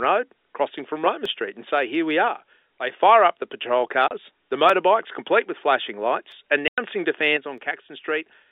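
At 1.25 s there is a single sharp click. The waveform jumps from one value to a later one. The likely cause is dropped samples, well under a millisecond of them. Nothing audible is lost. Only the click marks it.

From 2.28 to 3.01 s the sound suddenly falls by about 6 dB. This is one channel dropping out. Sound shared by both channels halves in the mono sum. Anything carried only by the missing side vanishes. A channel loss is the likely cause.

At 4.08 s comes a 30 ms hole of silence, ending at 4.11 s. At 6.68 s a longer 100 ms hole follows, ending at 6.78 s. Both are packet loss filled with silence. The gaps fit 10 ms packets.

At 7.37 s the same 6 dB drop returns. It lasts to the end of the clip. Again one channel has likely dropped out.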